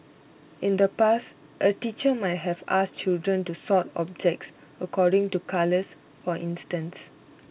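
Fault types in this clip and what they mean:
Clock drift between sender and receiver: The far end's clock is running around four percent fast, so audio keeps arriving quicker than it's played out and the jitter buffer keeps creeping full. That surplus has to be shed somewhere, so small timing hiccups keep turning up through the whole clip at uneven spacing.
Repeated timing corrections: From about 0.04 s to 7.48 s the receiver keeps snipping out short bits to keep up, which works out to the speech moving at about 104 percent of its natural pace. The cuts are tiny and irregular, over narrowband sound that stops at 4 kHz and fits a G.711 call.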